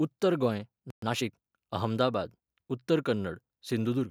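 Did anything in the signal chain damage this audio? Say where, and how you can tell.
Yes. A playback stall hits the speech at 0.90 s: the output drops to silence for 120 ms and resumes at 1.02 s. This happens at the playback stage, most likely because the player's buffer ran dry or its output thread was blocked.

Time-compressed catch-up follows from 1.02 to 1.50 s. The speech runs about 1.25 times faster at unchanged pitch. The player is shortening its backlog by dropping short segments and cross-fading across the joins.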